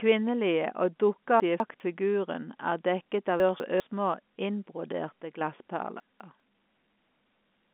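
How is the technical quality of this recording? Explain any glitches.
The speech comes through a G.711 A-law telephone line, so nothing above about 3.8 kHz is heard, and it is marked by three scrambled moments and one brief drop in level.

Chunks out of order occur at 1.4–1.8 s, 3.4–3.8 s and 6.0–6.4 s. In each, a 200 ms block of audio arrives one block late and plays after the block that should follow it. Nothing is lost, but the sound jumbles briefly at the hard joins.

A sudden gain jump runs from 5.09 to 5.41 s. The level drops by about 6 dB in a single step and later returns. Speech and background noise fall together with no fade, likely from a gain setting applied without a ramp.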